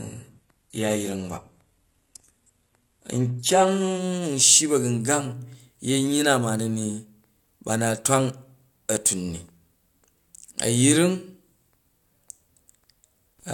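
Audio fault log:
0.0–4.0 s, adaptive stream starting at a low bitrate: the opening four seconds of speech sound thin and smeared, with nothing above about 12.3 kHz and treble that seems synthetic rather than real, plus heavier codec artefacts, which points to a very low-bitrate, HE-AAC-style rendition chosen so playback could begin quickly. At 4.0 s the sound abruptly gains clarity and detail without any gap, consistent with the player switching to a higher-quality version near 96 kbit/s once it had gauged the connection.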